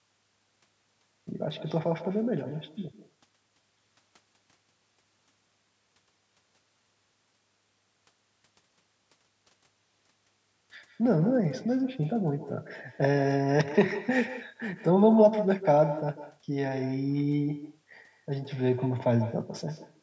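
Across the whole recording, echo with no canceller: the far end's loudspeaker feeds back into its microphone, so every phrase returns roughly 150 ms later, about 13 dB quieter and thin. Unlike reverberation, it is a distinct delayed repeat, not a smooth decay.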